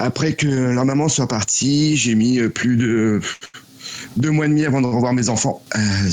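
At 3.33 to 3.43 s, again at 3.45 to 3.56 s, and at 4.85 to 4.94 s, the sound briefly hangs, held too long with a faint buzz or dip before carrying on. Each is a short stall from a late packet. The jitter buffer ran dry, so the receiver stretched the last sound for 78, 86 and 65 ms until the packet arrived, then resumed where it left off, with nothing lost.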